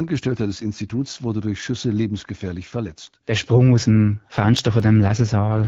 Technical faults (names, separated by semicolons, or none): AMR rate drop; CD scratch ticks